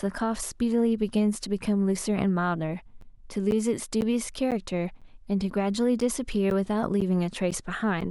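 From 3.01 s to 8.02 s, the speech has periodic USB or driver dropouts. Every 0.5 s, something blocks the audio path. Around 10 ms of signal is lost and filled with silence. The result is about ten evenly spaced ticks.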